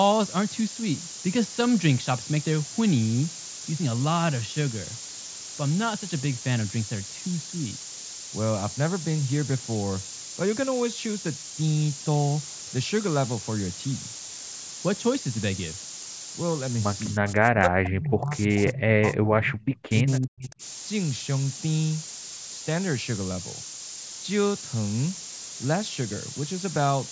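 From start to finish there's a steady, thin hiss climbing toward the top of the band, sitting not far under the speech: low bit depth with noise shaping, sounding like about 3-bit quantisation. From 17.14 to 18.51 s and again from 18.73 to 20.62 s the speech dips sharply, likely speech suppressed in double talk as the echo canceller ducked both sides. Inside that second stretch, from 19.61 to 19.79 s, a faint copy of the speech turns up about 337 ms late, likely an echo leak from a far-end loudspeaker.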